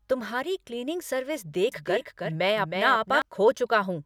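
Doubled audio track in this speech from 1.72 to 3.22 s, just after "तुम्हारी क्लीनिंग सर्विस": a dry, somewhat quieter copy trails about a third of a second behind, likely from a slower second capture path.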